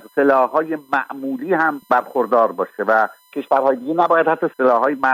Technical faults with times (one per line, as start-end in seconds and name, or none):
0.00-5.14 USB whine